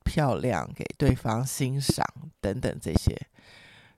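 A speech clip with loud pops at 1.09–1.12 s and 1.90–1.92 s, then a double pop at 2.96–3.10 s. Each stands roughly 20 dB above the speech, which continues underneath. The likely cause is a voltage spike from a switch, static or driver glitch.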